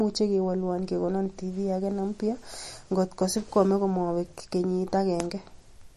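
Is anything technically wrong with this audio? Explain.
Yes. Throughout the speech, MP3 compression is likely at fault: nothing above 12 kHz, with watery, swirling sibilants from weak frequency lines dropping out frame to frame, which fits about 40 kbps. A plain low-pass filter would sound dull but steady, without this swirl.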